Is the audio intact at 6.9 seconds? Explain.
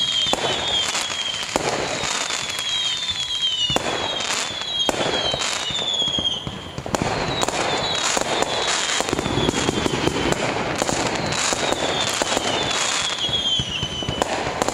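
No. A USB whine runs through the whole clip, including 6.9 s: current drawn in the USB bus's 1 ms frames leaks in through power or ground, giving a steady 1 kHz tone roughly 25 dB below the sound, a thin unbroken horizontal line on a spectrogram.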